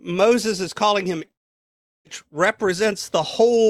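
At about 1.25 to 1.29 s there's a short concealed packet loss. Roughly 20 ms of the speech never made it to the decoder in time, so the receiver patched the gap by extending the sound just before it, then blended back into the real signal. You hear it as a quick smear or tiny wobble rather than a clean break, and anything very short in that spot can get swallowed.

Right after, from about 1.31 to 2.07 s, the audio drops out for roughly three quarters of a second. Almost all of that stretch, about 730 ms, is simply silent, after the receiver briefly carries the last sound forward as a fading buzz or hiss. When the speech comes back it picks up further along, with that chunk gone for good. That pattern most likely points to a long network dropout, where nothing arrived for the whole stretch.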